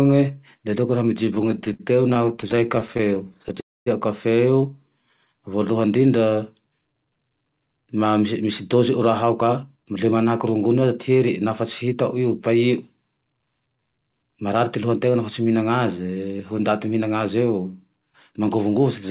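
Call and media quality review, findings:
Stutter, 1.26–3.58 s: speech drags in dozens of short stalls, longest 58 ms, about 395 ms filled in all (17% of the span), nothing lost. Jitter buffer repeatedly running dry on late packets, receiver extending the last sound each time before resuming.

Call audio freeze, 3.60–3.88 s: stall of 259 ms, last sound fading out, 230 ms of it near-silent, then speech resumes where it left off with nothing missing. Likely a burst of delayed packets emptying the jitter buffer, adding 259 ms of delay.

Jitter buffer slow-down, 4.89–5.26 s: speech stretched to 87% speed at unchanged pitch, sounds drawn out. Buffer rebuilding reserve by repeating single pitch periods, inserting 54 ms.

Jitter buffer speed-up, 7.09–10.12 s and 18.30–18.66 s: speech hurried at 109% and 111% speed, pitch unchanged. Buffer over target and trimming pitch-period slices, roughly 0.3 s removed in the first stretch and a few tens of ms in the second.

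Call path band-limited with nothing above 4 kHz, which fits a narrowband 64 kbps G.711 A-law codec.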